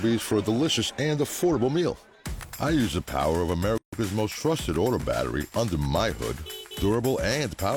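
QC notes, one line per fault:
3.78 to 3.93 s, gap at a join of encoded pieces: the sound drops out for about 148 ms, then resumes where it stopped. Two separately encoded pieces were joined untrimmed. The encoder's start delay and the last frame's padding both remain as silence.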